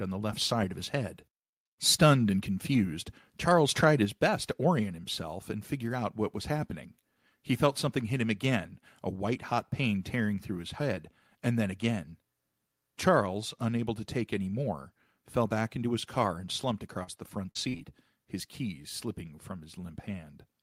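Speech, with three technical faults. Microphone overload comes first: the input gain was likely set too high, so from 2.02 to 2.12 s, just before "and confused", the peaks exceed the converter's ceiling by about 3 dB and a small share of samples are flattened, giving that syllable a harsh, crackly edge. At 4.05 s the microphone volume is stepped down about 4 dB in one move, probably an automatic correction after that overload, and voice and background drop together abruptly. Then four short concealed packet losses occur: about 40 ms of audio fails to arrive at 17.03 to 17.09 s, right after "his car and slumped", again at 17.51 to 17.57 s, and at 17.69 to 17.75 s after "the front" and before "his keys slipping from", and about 20 ms is lost at 17.77 to 17.81 s. In each gap, the receiver extends the preceding sound and crossfades back, producing brief smears and wobbles in that stretch.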